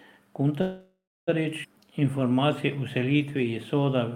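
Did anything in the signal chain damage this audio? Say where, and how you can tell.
Yes. At the network and jitter-buffer stage, packets were likely delayed long enough for the buffer to run dry. From 0.61 to 1.29 s the last sound is stretched into a decaying buzz that falls silent for its final 290 ms. Then speech resumes where it stopped, with nothing lost but roughly 0.66 s of added delay: a call audio freeze.

A skip ahead follows in the network stage, where a run of audio was discarded while later packets were already queued. At 1.63 to 1.66 s the speech jumps forward across an almost seamless 8 ms join, with roughly 300 ms of speech missing and the delay reduced by about the same amount.

From 1.81 to 4.1 s the jitter buffer, running low, rebuilt its reserve by repeating single pitch periods and pause fragments. This jitter buffer slow-down adds 213 ms, so speech plays at 91% speed with unchanged pitch and sounds audibly drawn out.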